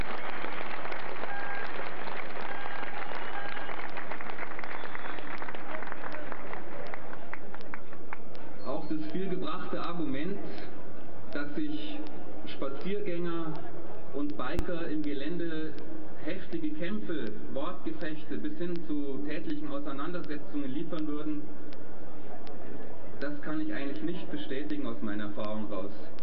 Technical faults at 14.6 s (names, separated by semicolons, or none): DC step